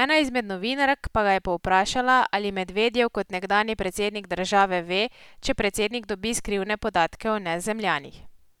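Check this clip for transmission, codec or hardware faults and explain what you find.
Nothing stood out on listening to this speech recording.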